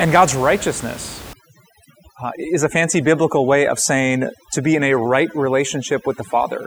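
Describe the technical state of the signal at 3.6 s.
At 3.6 s the signal is under overdone noise removal, running from 1.33 s to the end. The reduction is set so hard that bands near the noise estimate are pulled down or cut, taking quiet speech detail with them: the background drops and breaks up into twinkling specks.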